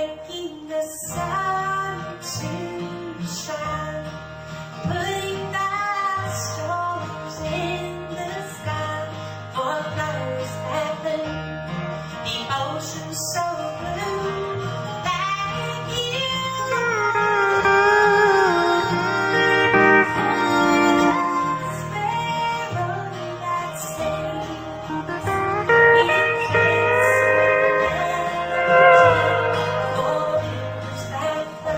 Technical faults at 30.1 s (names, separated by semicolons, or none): adaptive stream at a lower bitrate